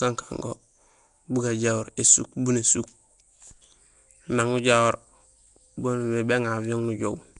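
From start to finish the speech has a rough, hissy halo and a smeared, underwater blur, with nothing above 10.6 kHz. That's likely Nellymoser compression, the old Flash Asao codec, at what sounds like roughly 44 kbps, filling starved bands with noise.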